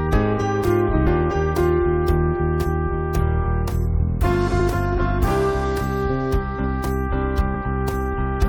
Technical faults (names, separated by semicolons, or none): compressed frames skipped